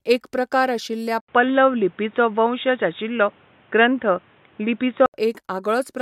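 At 1.20 s, after an 80 ms gap, the speech turns dull, with nothing above 3.8 kHz, until 5.14 s, likely from an input switched to a poorer device.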